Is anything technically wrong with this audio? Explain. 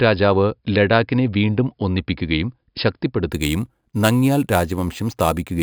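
Yes. From 3.32 s to the end, the speech gains a bright, metallic fizz that tracks its loudness, about 19 dB below it and spanning roughly 5.5 to 11 kHz. This is imaging from sample-and-hold upsampling: each sample was simply repeated to raise 11 kHz audio to 48 kHz without smoothing, so mirrored spectral copies appear.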